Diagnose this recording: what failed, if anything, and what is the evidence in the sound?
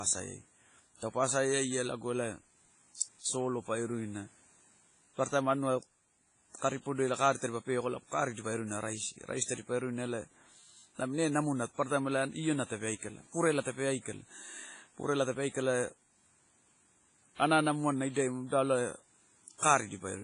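The damage is at the codec stage, and it runs through the whole speech clip: a ringing, washy smear, with a hiss that swells and fades along with the signal, and nothing at all above about 10.4 kHz. That's heavy transform-codec damage, likely WMA compression at a low bitrate, something like 24 kbps. Long blocks spread quantisation noise across tens of milliseconds, and the starved encoder zeroes weak spectral lines and the top band.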